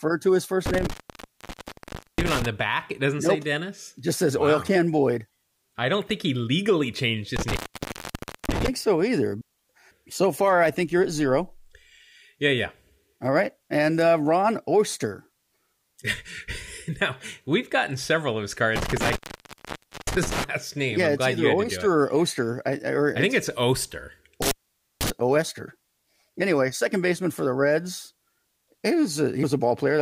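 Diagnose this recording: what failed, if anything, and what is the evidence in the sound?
The failure is in the analogue wiring: an intermittent contact in a loose cable or plug. The speech drops out four times, with crackle at the edges of each gap and faint hiss while the line is open: 0.66–2.46 s (open about 1.25 s), 7.36–8.68 s (0.93 s), 18.76–20.44 s (0.92 s) and 24.42–25.10 s (0.50 s). The conductor briefly loses continuity, breaking the signal path, and the scraping contact produces the crackle as it breaks and reconnects.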